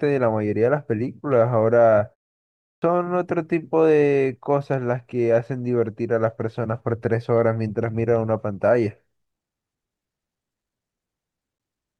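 Speech with two faults. At 2.78 s there is a clipped start after a pause: following a 0.71 s silence, the output device wakes late and swallows about 41 ms, so the sound begins abruptly without its onset. From 11.56 to 11.59 s, damaged data in the compressed stream makes the decoder lose frame sync and emit a brief glitch before it recovers at the next valid header.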